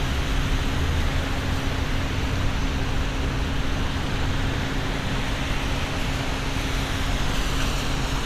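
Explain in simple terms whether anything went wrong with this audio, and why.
Nothing went wrong here: it's just a recording of sounds, and none of it was damaged or broken along the way.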